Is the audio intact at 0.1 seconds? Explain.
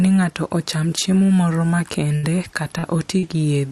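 Yes, at 0.1 s the speech is intact, with nothing there beyond the ordinary coding of the call path it passed through.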